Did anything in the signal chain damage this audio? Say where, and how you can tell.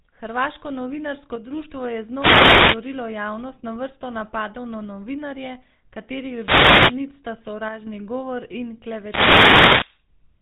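Yes. At the codec stage, a GSM full-rate codec, consistent with 13 kbps, gives buzzy, gravelly speech throughout; a spectrogram shows a hard ceiling at 3.8 kHz with pulse-driven roughness below.

Wireless microphone noise hits from the analogue radio link, as RF fades, come at 2.10–2.86 s (before "javnost na vrsto napadov"), 6.38–7.01 s (before "nit sta") and 8.95–10.04 s (after "govor in"). They show as broadband static smears.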